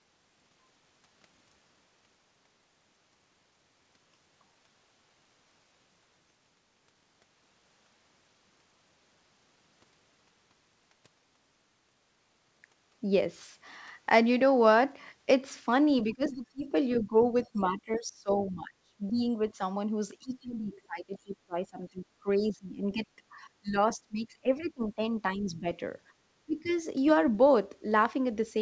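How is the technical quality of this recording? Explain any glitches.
The recording has audible echo-canceller trouble in its second half, and the band stops at 8 kHz, which fits a wideband call codec such as G.722 at 64 kbps.

Speech suppressed in double talk occurs from 16.04 to 19.60 s, 20.19 to 25.65 s and 26.46 to 26.71 s. The voice dips by up to roughly 20 to 25 dB, for about two seconds, four seconds and a fraction of a second in total. The likely cause is the canceller failing to separate the talker's speech from the simultaneous loudspeaker echo and attenuating everything.

The other side's voice is leaking through at 16.93 to 16.97 s, 17.43 to 17.63 s and 26.64 to 26.70 s. These are short scraps of a second voice, roughly 15, 35 and 25 dB below the talker. This is likely residual loudspeaker echo that the canceller failed to subtract.

The background is gated by the echo canceller at 26.13 to 26.18 s. 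The room tone drops by about 11 dB for around 50 ms and then recovers. The canceller clamped the microphone while the loudspeaker was active, briefly punching a hole in the ambience.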